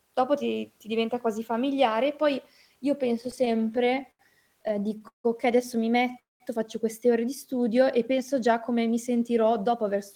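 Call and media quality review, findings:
Repeated stalls (stutter), 3.21–4.21 s and 4.63–5.26 s: jitter buffer repeatedly underrunning, concealment extending the last sound. 15 short gaps (longest 83 ms), then 7 (longest 160 ms). Choppy rather than one hole; nothing lost.

Call audio freeze, 6.19–6.42 s: single 0.21 s hold, decaying into about 170 ms of silence, then speech resumes where it stopped. Likely a one-off packet delay emptying the jitter buffer. One isolated gap, unlike the stutter's rapid series.

Jitter buffer slow-down, 7.47–7.99 s: speech drawn out to 93% speed, pitch unchanged, about 44 ms added by repeating pitch periods to rebuild the reserve. Stretched, not interrupted.

Jitter buffer speed-up, 9.69–10.16 s: speech hurried to 107% speed at the same pitch, roughly 40 ms trimmed as the buffer sheds excess delay. Compressed timing, no gaps or stretching.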